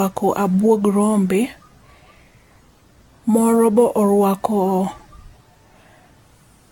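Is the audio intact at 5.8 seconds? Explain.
No. At 5.8 seconds, as across the whole clip, the speech sounds swirly and hollow, with smeared, blurred onsets and nothing above 17 kHz. This is generation loss, the likely result of the audio passing through an AAC-LC codec around seven times at a setting that fits about 96 kbit/s. Each re-encode quantises again on a shifted frame grid, so noise and spectral holes pile up beyond what one pass would leave.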